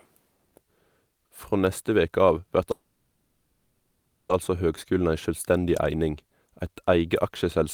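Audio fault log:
2.71–4.31 s, call audio freeze: the sound stalls and the last moment is stretched into a fading buzz for about 1.6 s, ending in a brief silence, then resumes where it left off with nothing lost, now 1.58 s later, likely from delayed packets draining the jitter buffer.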